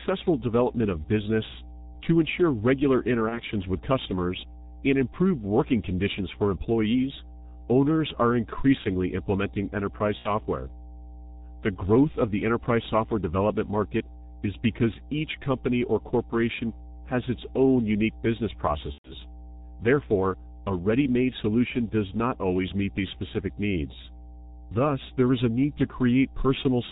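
Mains hum runs throughout the speech as a steady 60 Hz tone about 20 dB below the signal, seen as a flat horizontal line at the spectrogram's bottom. The G.723.1 codec also muffles everything, leaving nothing above 4 kHz and blurring consonants into hoarseness, which fits a low rate near 6 kbit/s. VoIP packet loss concealed by the speech codec appears at 3.29–3.42 s, 10.19–10.31 s and 18.92–19.11 s: the decoder stretches the last sound into a fading buzz or coloured noise, visible as smeared, repeating harmonics and a shrinking waveform envelope. The gaps point to one, two and four lost 30 ms frames.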